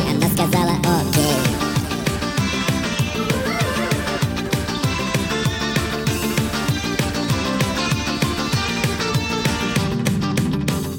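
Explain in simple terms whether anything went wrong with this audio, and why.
Something went wrong from start to finish: a wrong sample rate. Everything plays 1.5 times too fast and about seven semitones too high, which fits 32 kHz audio played at 48 kHz. Speed and pitch rise together, unlike a pitch shift, which keeps the original timing.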